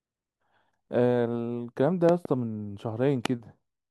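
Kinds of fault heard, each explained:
Loud pop: a sudden electrical pulse, likely from a plug, switch, static discharge or driver glitch, lands on top of the speech, which carries on underneath without a break. A double pop sits between 2.09 and 2.27 s, peaking about 15 dB above the speech, and a single, stronger pop at 3.26 to 3.28 s peaks about 20 dB above it. The continuing speech sets it apart from a dropout.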